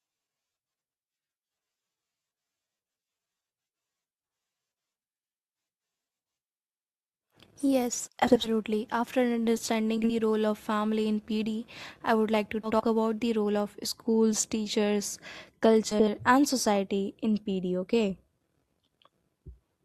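Speech, with brief garbled flutters at 0.77–0.93, 3.03–3.07, 8.27–8.49, 9.98–10.11, 12.63–12.82 and 15.91–16.08 s (just before "and society in"). This is frames out of order: swapped neighbouring blocks of roughly 20 to 80 ms, which fits runs of one to four short frames. From 6.77 to 13.30 s, ending before "role of schools teachers", a hiss rides on louder, brighter sounds. This is sample clock jitter: a converter clock wobbling by a few microseconds, with the error about 30 dB below the signal.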